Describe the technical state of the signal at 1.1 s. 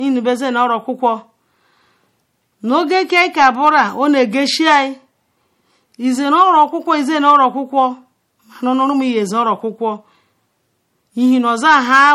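At 1.1 s, as throughout the speech, the signal shows low-bitrate audio saved at a high bitrate: nothing sits above 16.5 kHz, and the smeared, swirly coding artefacts of a heavily compressed MP3 ride on the voice. This is likely an MP3 made at a low rate, around 48 kbit/s judging by the damage, and later re-encoded at a generous rate such as 192 kbit/s. The second pass kept the earlier losses and couldn't restore what was removed.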